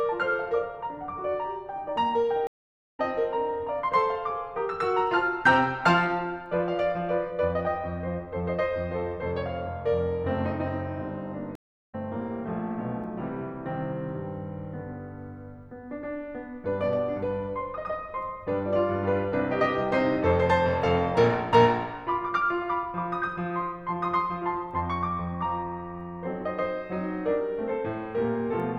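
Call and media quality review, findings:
Stream reconnect, twice in the music: 2.47–3.00 s, dropout of 0.49 s, picks up roughly 0.4 s further on; 11.55–11.95 s, 0.35 s gap, jumps ahead about 0.3 s. Player's connection dropped, fresh decoder joined mid-stream, skipped material lost.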